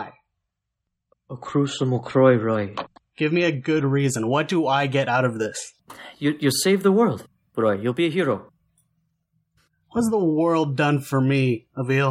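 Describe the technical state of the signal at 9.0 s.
At 9.0 s the speech signal is intact, with no audible fault at that moment.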